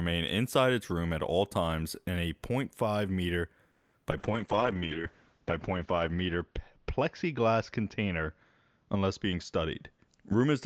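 It's a speech clip, and the trouble starts at 3.71 s with what sounds like a call audio freeze. For about 0.24 s, up to 3.95 s, the last bit of sound is stretched out into a fading, buzzy fill, and then the speech picks up where it left off with nothing actually lost. That's the signature of packets held up in transit. The jitter buffer likely ran dry, so the receiver had to invent about 220 ms of audio to cover the wait, and the whole call ends up that much further behind. Right after that come two bits of short concealed packet loss, from 4.03 to 4.06 s and from 4.10 to 4.13 s. Each one is a quick smear or wobble where the receiver patched a hole by carrying the previous sound forward and then blending back into the real signal. Roughly 40 ms and 20 ms of real audio are gone there, and in the first one the receiver seems to have skipped ahead a little to claw back some of the delay it had just built up. 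From 4.18 s to the end you can hear a call bitrate drop. The encoder falls from 48 kbps to just 7 kbps and sits at the bottom for about 1.2 s. At that rate Opus codes far more coarsely and narrows the audio band from 20 kHz to 8 kHz, so the speech goes dull, rough and a bit watery for the rest of the clip. Overlapping that, between 4.56 and 4.80 s, there's a jitter buffer slow-down. The speech plays at about 87% speed but keeps its pitch, so sounds feel drawn out. The receiver was repeating single pitch periods to rebuild a cushion, adding about 40 ms in total. Finally, from 9.33 to 10.56 s, the opposite happens with a jitter buffer speed-up. Playback runs at about 111% with the pitch unchanged, so it sounds a little rushed. Short pieces of one or a few pitch periods were cut out to trim excess delay, somewhere around 150 ms altogether.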